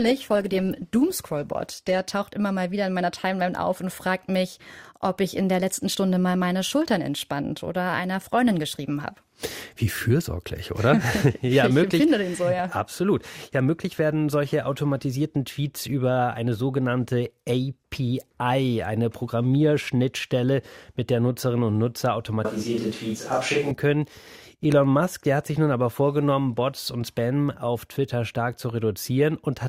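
Speech recording with two faults. From 0.0 to 2.0 s the adaptive stream starts at a low bitrate: treble is thin and codec artefacts are strong, consistent with roughly 16 kbit/s Opus, until quality jumps without a gap to about 64 kbit/s just before "taucht immer mal wieder". Between 22.45 and 23.71 s the sound turns abruptly roomy and hollow, with less bass, little level change, and room noise around 25 dB below the speech, likely a switch to a distant microphone.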